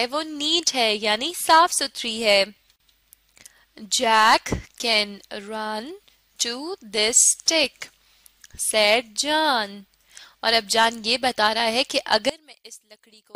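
Near the end, from 12.29 to 13.35 s, the sound collapses by about 23 dB into a faint residue, likely one channel inverted cancelling the shared content in mono.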